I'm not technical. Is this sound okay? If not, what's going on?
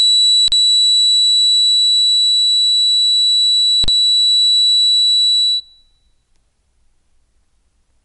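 No. The music sounds dull and clearly watery throughout, with nothing above 11.2 kHz, which is likely MP3 compression squeezing it too hard. At 0.48 s and 3.84 s it freezes for 40 ms before the music returns: an underrun with held sample, where playback briefly ran out of audio and lost that moment.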